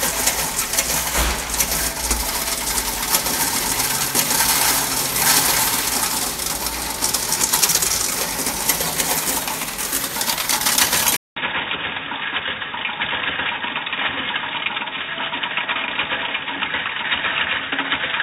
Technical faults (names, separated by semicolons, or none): input switched to a poorer device